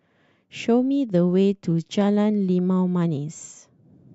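No technical faults can be heard anywhere in the recording.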